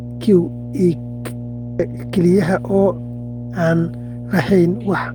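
A steady 60 Hz mains hum sits under the speech from start to finish, at roughly 10 dB below the speech level, so it is plainly audible. It comes from the power line leaking into the signal path through a ground loop or a nearby transformer. Unlike rumble or broadband noise, it is a fixed, pitched tone that never changes with the speech, and its frequency identifies it as coming from a 60 Hz supply.

At about 1.79 s the playback jumps forward: a skip ahead. Roughly 0.4 s of speech is simply missing, and the material on either side is joined almost directly, with no silence or filler in between. This points to a block of already queued audio being discarded, in transit or by an overflowing jitter buffer. A dropout would leave a gap and concealment would leave a smeared patch, but here the audio just lurches past the lost stretch.

Right after, from 1.89 to 2.99 s, a jitter buffer speed-up makes the speech run about 7% fast while its pitch stays the same. 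The receiver trims one or a few pitch periods at a time, removing around 70 ms in total to reduce the buffered delay. Because the pitch is unchanged, this differs from a sample-rate error. It sounds hurried rather than higher, and the effect stops once the buffer has drained.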